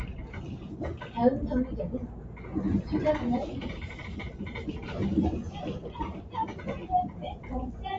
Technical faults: sound cut by the noise suppressor

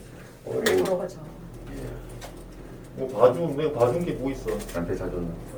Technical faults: generation loss

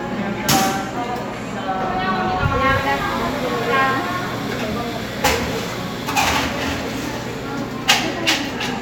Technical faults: none

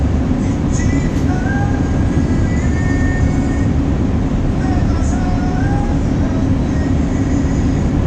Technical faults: none

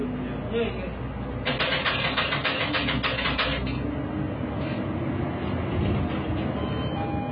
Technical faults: AAC compression

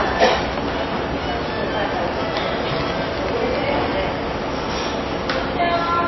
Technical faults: MP3 compression

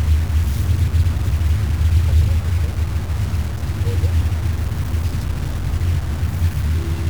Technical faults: low bit depth without dither

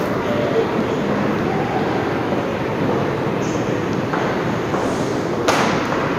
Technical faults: DAB burbling

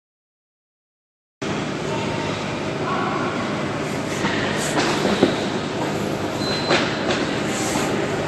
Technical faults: transcoding between lossy codecs; cut-off start

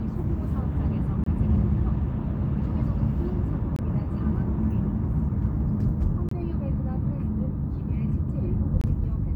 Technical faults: gap between chunks

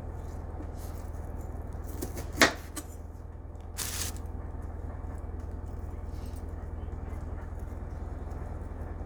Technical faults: none

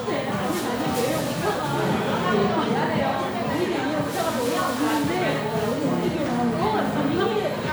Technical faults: none

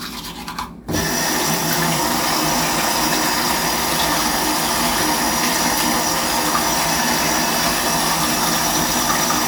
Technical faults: none

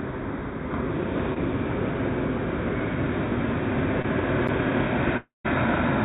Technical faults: short concealed packet loss; block of digital silence; long network dropout

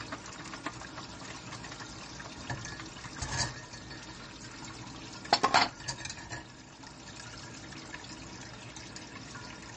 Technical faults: MP3 compression

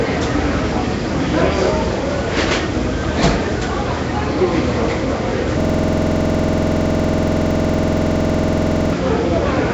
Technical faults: Nellymoser compression; system hang loop

